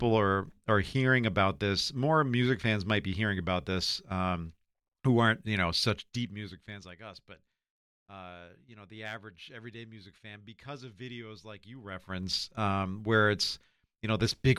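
From 5.86 to 6.99 s, after "who aren't you know", zipper noise: the level drops roughly 20 dB in unsmoothed steps of about 1 dB, around twenty a second, giving a fine ticking zip. It returns from 11.74 to 12.26 s, after "because of videos like", rising about 20 dB at roughly forty steps a second.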